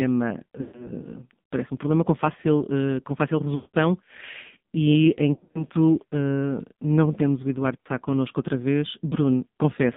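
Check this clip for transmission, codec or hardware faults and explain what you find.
The speech has passed through the AMR narrowband mobile codec throughout, and there are four bursts of lost AMR speech frames.

The codec runs at 5.9 kbps and leaves a band of roughly 150 Hz to 3.6 kHz. At that rate the vocal-tract model gets very few pulses, so the heavy damage comes across as buzzy, synthetic voicing with nothing above the line band.

Frames are lost from 0.62 to 0.92 s just before "parece um problema com", from 3.56 to 3.77 s after "fácil uh com fácil", and from 5.34 to 5.65 s before "uh não temos o", scattered with gaps. A short one follows at 7.80 to 7.87 s. The decoder repeats the last pitch and filter settings at falling gain, so the sound smears, sags toward silence in the longer runs and returns rough.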